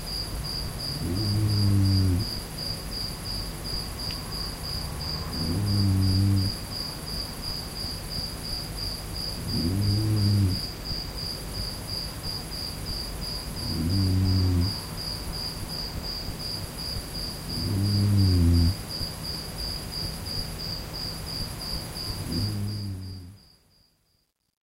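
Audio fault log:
12.38 s and 16.0 s, dropped buffer (overrun): Each time there is a sudden jump forward in the sound. No gap of silence comes between. At 12.38 s roughly 70 ms of audio goes missing. At 16.0 s the loss is shorter, around 20 ms. The likely cause is that the program fell behind and the hardware wrote over samples before they were read. The two sides of the missing piece then butt together.
22.39 to 24.68 s, truncation distortion on a fade: The fade-out begins around 22.4 s. But its tail turns gritty. The fade is computed with only 10 bits and no dither, so low levels fall onto a handful of coarse steps. As the signal shrinks toward the smallest step, the waveform becomes blocky and square. From 23.14 s to the end it is worst.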